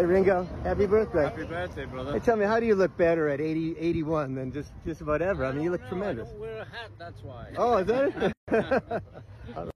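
Near the end, from 8.33 to 8.48 s, the continuous sound drops out in a gap of about 150 ms with smeared edges, then resumes where it stopped. This is a gap at a join of encoded pieces: separately encoded segments were joined untrimmed, leaving encoder start delay and last-frame padding.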